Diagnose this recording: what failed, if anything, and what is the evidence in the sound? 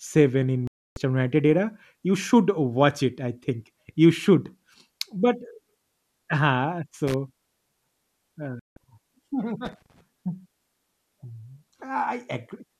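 Digital broadcast dropout, a reception fault. The speech mutes cleanly from 0.67 to 0.97 s and from 8.59 to 8.77 s while corrupt frames are discarded. Clean silence, not added noise, marks it.

Loose connector crackle in the analogue wiring. Irregular scratchy bursts at 7.07–7.14 s and 9.65–10.01 s come from a contact making and breaking. Added noise rather than silent gaps distinguishes it.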